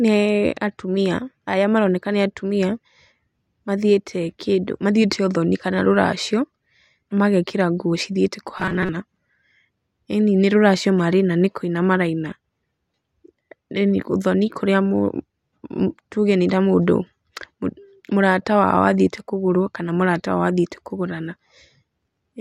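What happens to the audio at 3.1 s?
Nothing goes wrong at 3.1 s: the speech runs through that moment intact, with no dropout, click or other fault.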